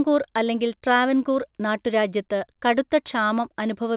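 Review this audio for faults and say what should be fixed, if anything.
No faults are present in this speech, which carries the band-limited sound of a WebRTC call path with nothing above 4 kHz, consistent with a G.711 mu-law link at 64 kbps, so there is nothing to fix.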